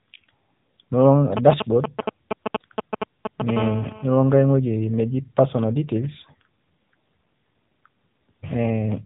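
A speech recording carried through the AMR narrowband mobile codec. The band is cut off near 3.8 kHz, and the voice has a plainly buzzy, synthetic edge. That degree of damage points to one of the lower AMR-NB modes, roughly 8 kbps, where too few pulses are available to shape each subframe. From 1.37 to 3.51 s there are GSM signalling bursts: a galloping dit-dit-dit of short 217 Hz buzzes. They come from a nearby 2G phone's radio bursts being rectified in the audio circuit and reach roughly the level of the speech itself. From 3.57 to 4.56 s this turns into steady GSM phone buzz, a hard, raspy 217 Hz tone with many harmonics at about 13 dB below the speech. It is a nearby 2G phone now transmitting its regular bursts as in a call.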